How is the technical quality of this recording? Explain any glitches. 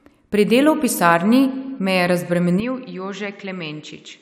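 The recording has one clear fault in its final stretch. From 2.6 s to the end, the speech changes character abruptly. The likely cause is an input switched to a poorer device partway through. The new path cuts off everything above about 7.6 kHz. The speech loses its air and sounds duller and more boxed-in. The level drops by roughly 10 dB. A new background noise appears, around 40 dB under the speech. No gap marks the change.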